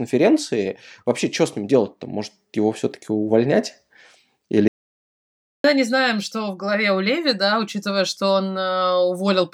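At 4.68 s the speech drops out to dead silence and doesn't come back until 5.64 s, so close to a full second just vanishes. It's an audio dropout to silence: the input was likely lost for a moment, maybe a loose connection or an accidental mute, while the recorder kept writing silence. You hear the sound cut off mid-flow and restart abruptly, with no room tone at all filling the gap.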